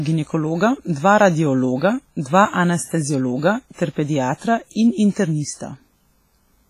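Across the whole speech clip the sound rings and turns washy, with a hiss that swells and fades alongside the voice, and nothing reaches above about 15.5 kHz. This is likely heavy WMA compression, consistent with roughly 24 kbps, where long transform blocks smear quantisation noise and zero weak lines.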